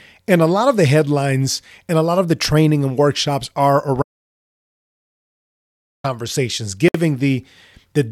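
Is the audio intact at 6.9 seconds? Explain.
No, the speech drops into a sudden silence of about 60 ms from 6.88 to 6.95 s, then resumes. It is a gap at a join of encoded pieces, where encoder start-up delay and end padding remained.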